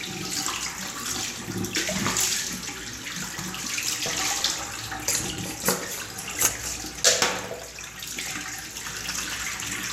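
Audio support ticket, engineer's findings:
DAB burbling. Weak reception lets bit errors slip past error correction into the MP2 stream, around a fraction of a percent. Corrupted scale factors make sub-bands jump in level for up to a frame. Short noise blips in single sub-bands over the audio at 1.14–1.58, 3.97–4.42, 5.94–6.36, 7.98–8.31 s.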